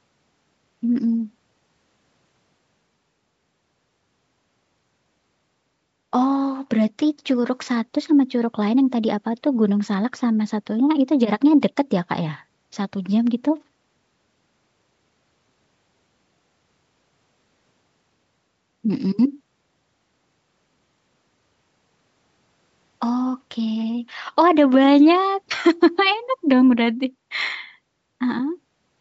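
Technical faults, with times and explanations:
No technical faults are audible.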